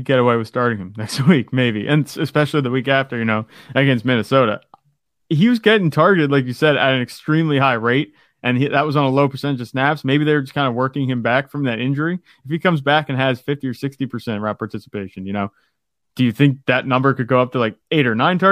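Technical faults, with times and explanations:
The speech signal shows no technical faults at any point.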